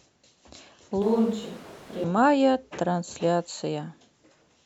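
From 1.02 to 2.04 s speech abruptly turns hollow, about 5 dB quieter, likely a switch to a distant microphone; the waveform steps down and spectrogram bass thins.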